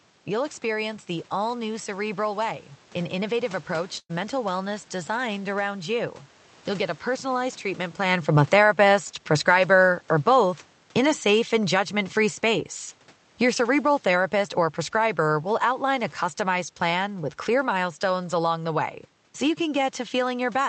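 At 3.99 to 4.11 s a burst of packet loss interrupts the speech. The receiver covers the gap of about 100 ms by extending the last sound and fading it down, so it comes through as a brief smeared tail. About 100 ms of the original speech is skipped when playback resumes.

From 7.32 to 12.72 s the automatic gain is falling. The gain control judged the input too loud or its background noise too strong and reduced its level gradually by about 5 dB, so the speech and the room noise behind it sink together. The talker also moves around 8 s.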